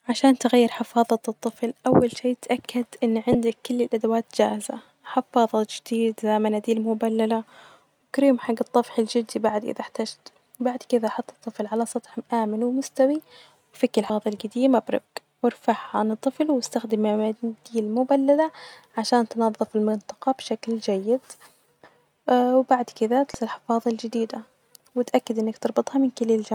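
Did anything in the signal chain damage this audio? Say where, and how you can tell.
Yes: damaged data in a compressed stream at the codec stage gives brief glitches at 3.31–3.35 s, 14.06–14.10 s and 23.34 s, where corrupt frames desynchronise the decoder until it finds the next header.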